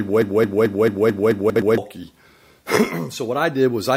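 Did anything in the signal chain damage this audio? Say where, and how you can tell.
Yes. A broken-record loop is already running at 0 s: a stalled player, encoder or stream likely kept resending its last fragment, so a 0.22 s piece repeats seven times until 1.78 s and the intended audio is lost.

Chunks out of order appear between 1.5 and 1.62 s. A 60 ms chunk arrived or was written one chunk late, so the sound jumbles across three hard joins.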